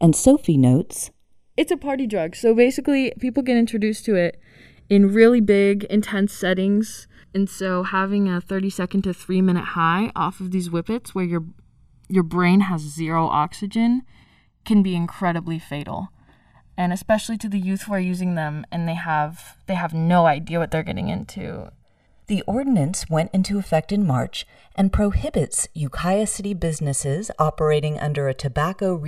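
Throughout the speech, the channels drift apart: the two sides run on clocks differing by around 50 ppm, so the delay between them creeps up to about 2 ms by the end. Summed to mono, sweeping comb notches produce a slow flanging.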